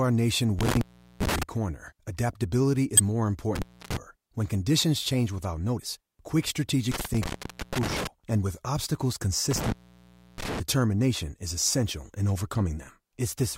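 Speech with intermittent contact at 0.59–1.43, 3.55–3.97, 6.92–8.07 (before "and with obstacles") and 9.51–10.60 s (after it): dropouts of 0.29–0.66 s, crackly edges, faint hiss beneath. Damaged data in a compressed stream gives shorter glitches at 2.97–3.00 (after "corner adaptability"), 5.78–5.80 and 12.89–12.91 s, where the decoder loses sync, without the crackle or hiss.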